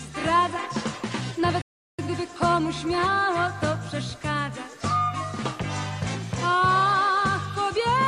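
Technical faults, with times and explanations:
1.62–1.99 s, playback stall: the player most likely ran short of buffered data or had its output thread held up, so nothing reached the output for about 370 ms. The sound cuts off abruptly in mid-flow and leaves a hard gap of silence rather than a fade, then resumes once the player recovers. Because the break lands inside continuous material instead of at a natural pause, it reads as a hiccup in delivery.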